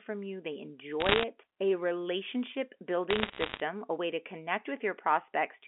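From 1.00 to 1.24 s, after "you they", and 3.10 to 3.60 s, before "a way to", bit errors on a digital phone line corrupt individual samples, giving sharp ticks and crackle.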